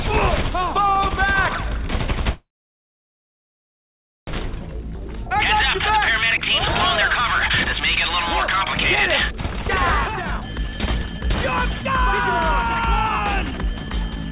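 A call audio freeze runs from 2.32 to 4.29 s. The sound stalls into a brief fading tail and then about 1.8 s of silence before resuming where it left off. The likely cause is delayed packets draining the jitter buffer.

Jitter buffer speed-up follows at 4.71–5.32 s, 5.79–6.60 s, 7.09–8.76 s, 9.29–11.90 s and 12.65–14.32 s. The buffer trims pitch-period slices to shed the built-up delay, so the audio hurries at unchanged pitch. Speeds are 109%, 105% and 108% at first. They rise to 139% and 127% late, when roughly a second and half a second are cut. The narrowband call path stops near 4 kHz, which fits 64 kbps G.711.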